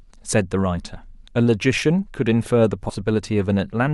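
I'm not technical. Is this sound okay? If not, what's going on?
No. At about 2.89 s, compressed frames skipped: roughly 70 milliseconds of speech vanishes, so the talking jumps ahead.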